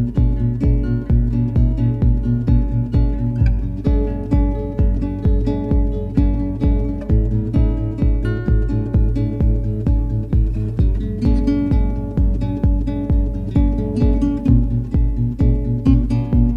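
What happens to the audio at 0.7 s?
Nothing goes wrong at 0.7 s; the audio plays through that moment intact, with no dropout, click or distortion.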